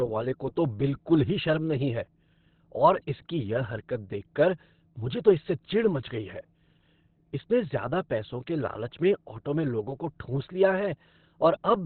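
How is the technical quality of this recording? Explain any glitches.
The quality is poor, with heavy damage throughout. From start to finish the speech is muffled and hoarse, and nothing is heard above about 4.3 kHz. The likely cause is Opus compression in its narrowband speech mode. At such a low rate the encoder drops high frequencies and models the voice coarsely. That fits a bitrate near 12 kbps.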